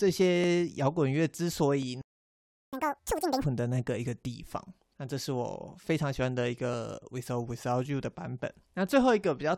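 The speech in this clip drops out abruptly at 2.02 s and stays silent until 2.73 s, a gap of about 0.71 s. This is a playback stall, likely caused by the player running out of buffered data or having its output thread blocked, so nothing reached the output until it recovered. On a waveform it shows as a flat line cutting straight through ongoing speech. On a spectrogram it is a fully blank vertical band with hard edges on both sides.

From 2.73 s to 3.44 s the speech resumes in a catch-up at higher speed. The player works through its backlog at 2.0 times normal rate by resampling, so the audio is both hurried and raised in pitch by around ten semitones, giving a chipmunk-like quality before it drops back to normal. On a spectrogram the harmonics and formants in this stretch sit visibly higher and are squeezed closer together in time. The waveform shows denser, compressed cycles.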